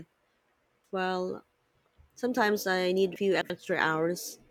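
One block of audio reached the output late and was slotted in three positions after where it belonged. The result is chunks out of order between 3.16 and 3.50 s, just after "I need". Each chunk is about 85 ms long. Nothing is missing, but the segment is reshuffled, so the sound there comes out jumbled, with three hard joins where mismatched pieces meet.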